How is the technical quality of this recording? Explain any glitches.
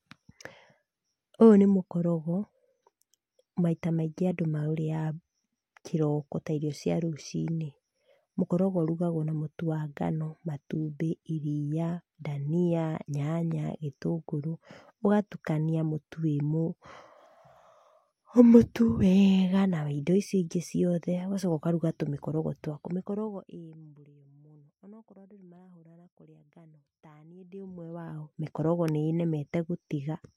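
The recording has two stretches of zipper noise in this speech clip. From 22.64 to 24.13 s, between "ũkaruga tũmĩkorogo" and "mũno onokorũo andũ", the level drops by roughly 25 dB. From 27.34 to 28.49 s it comes back up by about the same amount. Each change is applied in small unsmoothed steps, around a hundred a second, so each step leaves a tiny click, heard as a fine zipping while the level moves. A clean fade would change the level without that ticking.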